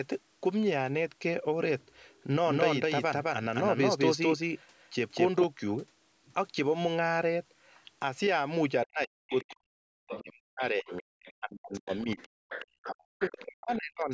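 Speech recorded through call microphone processing, with nothing above 8 kHz. From 2.46 to 5.44 s there is a doubled audio track. A second copy of the speech follows about a fifth of a second behind. It is roughly as loud as the original. It has no reverb tail or room colour, and it starts and stops abruptly. The likely cause is a second capture through a slower path, or an edit leaving two copies out of step.

Speech suppressed in double talk appears from 8.85 to 12.45 s and again from 12.85 to 14.11 s. The talker's level drops very deeply, in places almost to silence. Around three seconds of the first span are affected, and about one second of the second. The likely cause is an echo canceller that could not tell the talker from the loudspeaker echo while both sides spoke, so it turned both down.

The other side's voice leaking through is heard at 9.30–9.56 s, 10.09–10.22 s, 10.92–11.33 s, 11.74–12.89 s and 13.42–13.77 s. 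These are scraps and one longer stretch of a second voice, well below the talker's level. The 10.09 s scrap is the strongest, and those at 10.92 s and 13.42 s are faint. The likely cause is loudspeaker playback that the echo canceller did not fully remove from the microphone.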